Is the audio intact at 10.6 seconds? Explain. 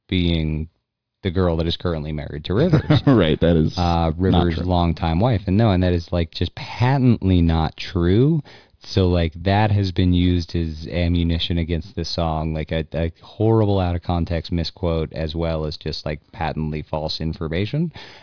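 Yes, at 10.6 s the speech plays through cleanly, with no dropout, click, distortion or other fault at that moment.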